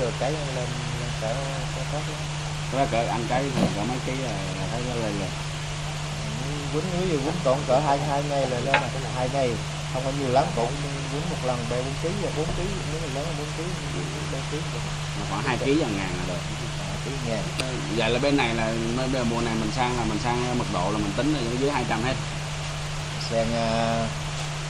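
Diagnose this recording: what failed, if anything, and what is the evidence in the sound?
The failure is at the playback stage: a scratch or blemish on the disc destroyed more data than the error correction could rebuild, so the player had to interpolate or mute short runs of samples once per revolution. This produces CD scratch ticks: eight regular clicks between 3.75 and 5.13 s, roughly five or six per second, each lasting at most a few milliseconds. The sound breaks briefly at each pass over the damage and then carries on.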